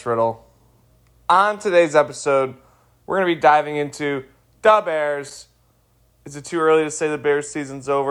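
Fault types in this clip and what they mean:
Loose connector crackle: A worn contact makes and breaks the signal. It chops the speech briefly. A short scratchy burst follows "be diving into the", near 5.29 s.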